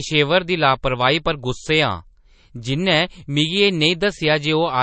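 MP3 compression artefacts run through the whole speech clip: nothing is heard above about 8.3 kHz, and the sound has a watery, swirling quality, with metallic chirps on s sounds. This likely comes from an MP3 encoder short of bits, which fits a very low bitrate near 34 kbps.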